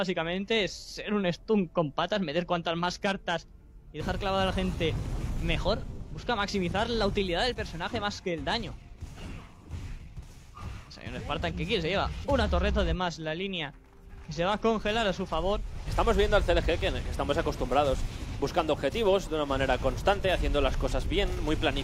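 At 5.77 s, running to about 5.84 s, the audio briefly turns into a smeared, noisy or phasey patch, lasting roughly 43 ms, which fits a single lost AAC frame. This is AAC frame loss with concealment: the data for that stretch never reached the decoder, so it rebuilt the gap from the last good spectrum, scrambling signs or interpolating energy rather than playing the real content. The loss was short enough that the concealment stood in without fading out.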